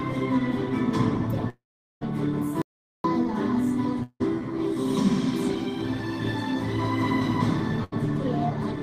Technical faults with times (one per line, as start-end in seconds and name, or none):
1.49-2.03 long network dropout
2.62-3.04 audio dropout to silence
4.03-4.22 long network dropout
7.84-7.94 burst of packet loss